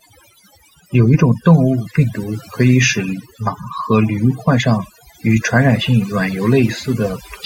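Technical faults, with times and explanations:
Throughout: overdone noise removal. A noise reducer set far too strong keeps pulling individual frequency bands down to nothing whenever they sit close to its idea of the noise floor, so the gaps between phrases drop to near silence dotted with twinkling, chirpy specks, and the softer parts of the speech are stripped away with them. Unlike a noise gate, which shuts the whole signal at once, this works band by band, so the residue flickers in pitch rather than cutting in and out.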